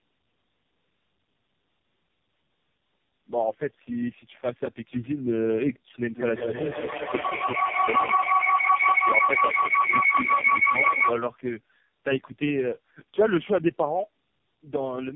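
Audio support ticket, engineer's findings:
Rough, muffled, warbly speech the whole way through, nothing above 3.6 kHz. Tandem speech coding: three low-rate speech codecs in a row, each re-encoding the last one's damage. Sounds like an AMR-NB leg, then a G.723.1-type hop, then AMR-NB again.

Feedback howl from 6.13 to 11.3 s, peaking about 6 dB over the speech. A narrow tone around 2 kHz, loop repeat roughly 150 ms. Two devices on the call in the same room, so the mic-to-speaker loop keeps adding gain until someone breaks it.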